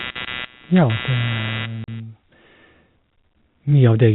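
Load swings in the computer feeding this speech recording leak through the shared ground into the audio path, producing computer activity noise from the start to 2.0 s: a buzzing, chirping texture pulsing at roughly 150 times a second, sitting only around 10 dB below the speech and tracking the machine's workload rather than the talker. Near the end of that stretch, packet loss filled with silence cuts a 40 ms hole from 1.84 to 1.88 s. The receiver inserted silence for the missing data, a gap that fits two 20 ms packets, so the speech drops out abruptly with hard edges on both sides. Throughout, the G.711 telephone coding limits the band to below 4 kHz.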